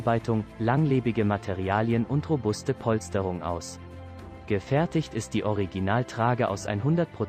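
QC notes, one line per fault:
Nothing here needs flagging; I listened all the way through and found no faults to note.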